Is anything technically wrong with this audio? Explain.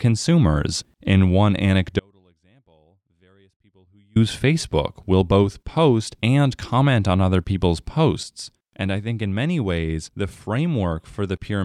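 Yes, there are two faults in this speech recording.

From 1.99 s to 4.16 s there is an audio dropout to a faint residue. The likely cause is that the wanted signal was lost upstream while the path after the break stayed live, so nothing fed it for about 2.16 s. The speech cuts out abruptly rather than pausing or fading, and the gap is not silent: a faint trace of sound remains, roughly 40 dB below normal level, before the signal returns just as suddenly.

At 8.23 s there is a sudden gain jump. This was likely a digital gain change applied between one sample and the next with no ramp, as when a setting or bit shift takes effect instantly. The level drops by 6 dB at once and stays there to the end, with the speech and the background noise falling together, so the step sounds like an abrupt switch rather than a natural change in loudness.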